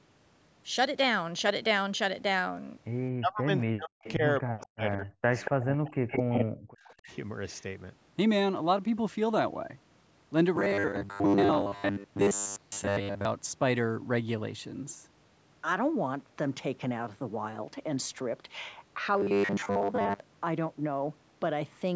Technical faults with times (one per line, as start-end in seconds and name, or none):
3.13-7.11 speech suppressed in double talk
4.03-4.12 echo leak
4.59-4.67 echo leak
5.38-5.65 echo leak
6.09-6.45 echo leak
6.85-6.94 echo leak
10.56-13.25 robotic sound from repeated short buffers
19.14-20.20 robotic sound from repeated short buffers